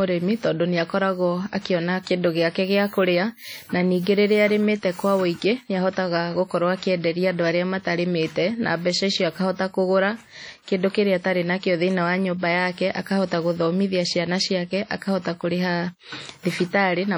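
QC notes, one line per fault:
throughout, WMA compression: the speech has likely been through a low-bitrate transform encoder with long blocks, pointing to an early WMA version at around 32 kbps. Too few bits per block leave quantisation noise smeared over tens of milliseconds and weak spectral detail dropped, so the damage is heavy: the speech rings and washes, and a hiss rises and falls with the speech level.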